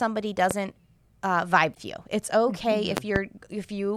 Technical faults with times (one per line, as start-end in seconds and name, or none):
0.51-0.54 loud pop
1.71-1.78 damaged data in a compressed stream
2.97-3.20 loud pop